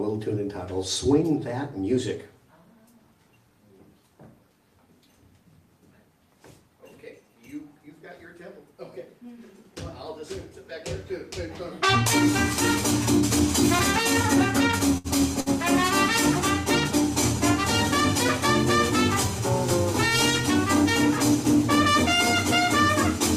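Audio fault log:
14.71–15.49 s repeated stalls (stutter): four brief gaps, longest 67 ms, where late packets emptied the jitter buffer and the last sound was stretched, so playback drags without losing anything.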